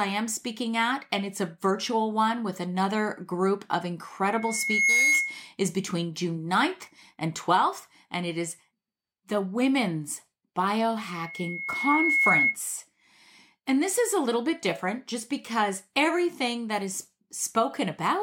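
Loudspeaker feedback squeal breaks into the speech twice, from 4.29 to 5.52 s and from 10.97 to 12.57 s. Each time the microphone hears its own loudspeaker, and at 2.2 kHz the loop gain passes one, so a single tone swells, over about 0.7 s the first time and 1.0 s the second, until it sits a little above the speech. That self-reinforcing rise sets it apart from a constant electrical whine, which appears at full strength and stays there.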